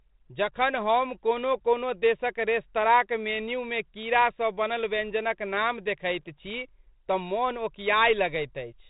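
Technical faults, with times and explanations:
No technical faults can be heard in this clip.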